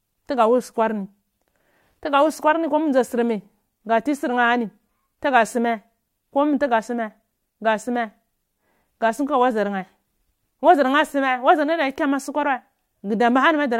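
No technical faults can be heard anywhere in the speech. Nothing in the recording calls for comment at any point.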